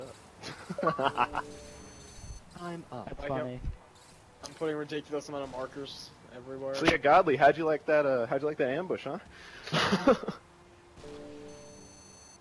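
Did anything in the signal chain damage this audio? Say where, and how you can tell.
No, nothing in the signal chain damaged this audio.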